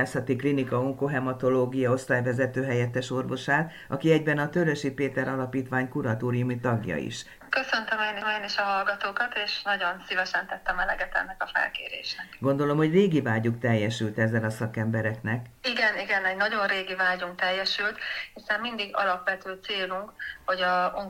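At 8.21 s there is a CD skip: a knock or a flaw in the disc threw the laser onto another turn of the spiral. The player mutes for a few milliseconds, heard as a brief tick, and the sound then resumes abruptly from a different point.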